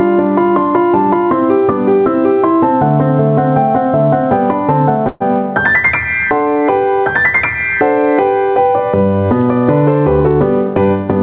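Gain pumping runs through the whole clip. The level swings by roughly 10 dB. Loud and quiet passages sit unnaturally close in level, giving a squashed, breathing quality. The likely cause is input gain set far too high for the microphone, with a fast limiter or compressor clamping down on each peak and releasing between them. The bandwidth tops out at 4 kHz, as expected from the G.711 mu-law call path.

At 5.08 s a call audio freeze holds the sound for about 124 ms, until 5.22 s. Instead of a clean dropout, the last fragment is stretched into a short buzz or hiss that fades, and then the audio carries on from exactly where it stopped. This is likely delayed packets leaving the jitter buffer empty, with the receiver concealing the wait. Nothing is lost, but the rest of the clip now runs 124 ms later than before.

From 10.28 s to 11.16 s a jitter buffer speed-up makes the sound run at about 110% speed while keeping its original pitch, so this closing stretch feels hurried. 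The receiver's buffer had built up more delay than it wanted, so it repeatedly cut out short pieces one or a few pitch periods long, removing roughly 100 ms in total to bring the latency back down.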